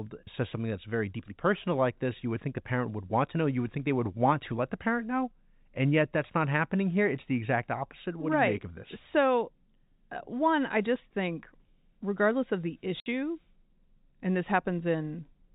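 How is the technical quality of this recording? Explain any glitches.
The speech comes through with the narrow sound of G.711 telephone coding, with nothing above 4 kHz, and there's one glitch worth flagging. At 13.0 s, packet loss filled with silence cuts a 60 ms hole in the audio, which fits three 20 ms packets going missing in a row. The receiver had nothing to play for those packets, so it inserted digital silence. The speech drops out abruptly and comes back just as abruptly at 13.06 s.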